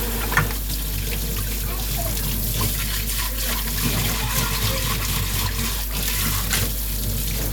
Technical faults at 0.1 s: mains hum

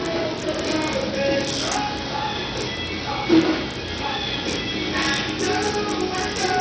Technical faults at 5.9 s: Bluetooth SBC compression

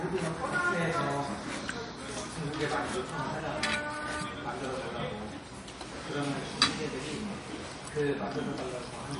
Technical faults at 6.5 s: MP3 compression

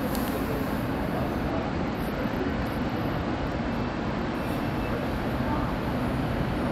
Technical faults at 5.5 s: none

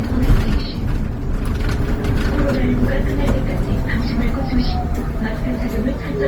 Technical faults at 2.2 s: generation loss

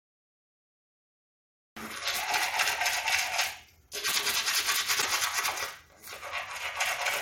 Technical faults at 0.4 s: cut-off start

